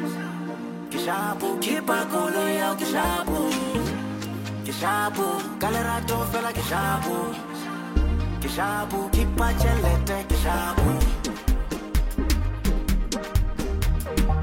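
No technical faults can be heard anywhere in this clip.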